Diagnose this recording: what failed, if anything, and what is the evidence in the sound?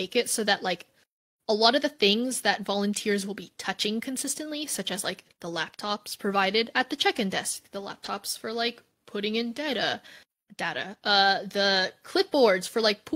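Nothing failed in this recording, and the sound offers no evidence of a fault at any stage.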